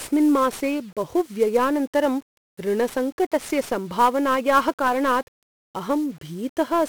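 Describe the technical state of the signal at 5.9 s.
At 5.9 s the speech carries 1-bit DFPWM compression, present throughout the clip. Single bits nudge an adaptive level, leaving heavy fuzzy, crackly hiss that buries the treble.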